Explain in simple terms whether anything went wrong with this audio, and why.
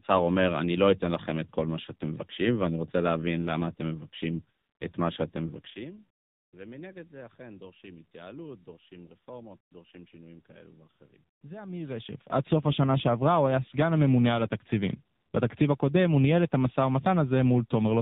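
Throughout, the speech sounds thin, buzzy and robotic, like a bad phone call, because the AMR narrowband mobile codec removed everything above 4 kHz and squeezed the voice into very few bits.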